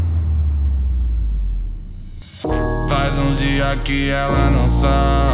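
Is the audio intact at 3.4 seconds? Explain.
Yes, the audio is intact at 3.4 seconds, with no fault at that moment.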